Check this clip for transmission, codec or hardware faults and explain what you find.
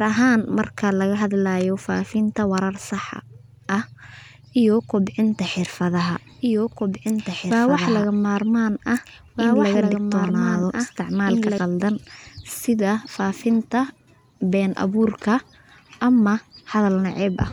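One fault stands out. From 5.96 s to 11.58 s, just after "iyo kobcinta", a second copy of the speech runs about two seconds behind, roughly 5 dB quieter, dry and cutting in and out abruptly. This doubled audio track is likely a second capture through a slower path, or an edit leaving two misaligned copies.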